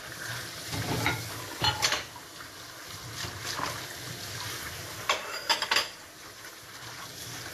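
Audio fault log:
Throughout: Vorbis compression, likely the cause of the plainly audible damage heard across the whole clip. The treble stops abruptly at about 14.2 kHz, and the band just below that edge has a hissy, grainy texture where fine detail has been replaced by noise of similar energy. Tonal components sound roughened and attacks are softened and smeared. This degree of damage fits a low bitrate of around 37 kbps, where the encoder quantises the upper residue very coarsely.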